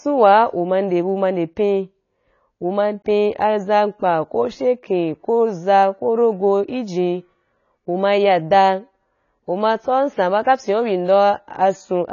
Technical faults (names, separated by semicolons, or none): AAC compression; clock slip clicks